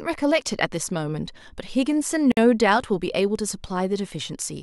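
Speech, with a gap at a join of encoded pieces at 2.32 s. A silence of about 54 ms cuts in. Separately encoded segments were joined untrimmed. Speech then resumes where it stopped.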